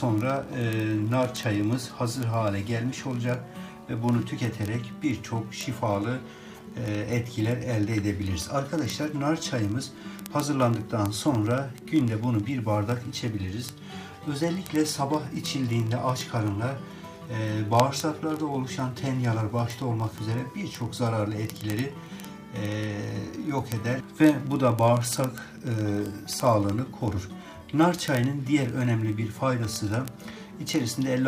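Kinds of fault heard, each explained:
Word clock ticks: The receiving device is running on its own clock rather than locking to the sender's digital link, and the two are off by something like 0.1 percent. Every time they slip past each other a single sample gets dropped or repeated, so you get a sharp tick roughly every 20 ms, about fifty a second. It starts at 0.12 s and runs to the very end, well over a thousand ticks.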